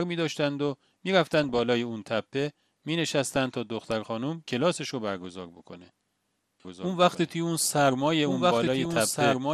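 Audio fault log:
throughout: MP2 compression. The speech sounds dull and gurgling, with granular distortion and flickering upper bands, likely from MP2 coding at a low rate around 80 kbps.
1.26–1.61 s, 3.36–3.63 s, 8.56–8.98 s: DAB burbling. Bit errors slip past error correction into the MP2 audio data. Short blips of noise in single sub-bands sit over the speech.
6.65 s to end: doubled audio track. A second full-band copy enters abruptly, roughly 1.5 s behind and about as loud. It is likely an out-of-step second capture.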